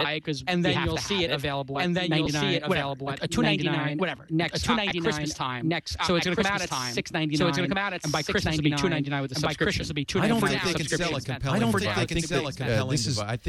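Throughout the clip, a doubled audio track runs under the main sound. A second full-band copy follows about one and a half seconds behind at roughly the same level. It has no decay or room colouring, which separates it from a reverb tail or a natural echo. A slow slapback of that kind would fade and take on tone. This copy is dry and matches the original exactly. The likely cause is a second capture through a slower path, or an edit that left two copies out of alignment.

At 2.25 s, 4.90 s and 7.12 s there are lost LE Audio frames. Each is a brief 7.5 ms patch, which fits the loss of a single LC3 frame. The decoder filled each gap by reusing the last spectrum with scrambled signs, so any tonal content turns into a short noisy smear instead of dropping out. That separates these from a plain dropout or click, which would be silence or a sharp edge. Each gap is too short for the fade toward silence to be heard.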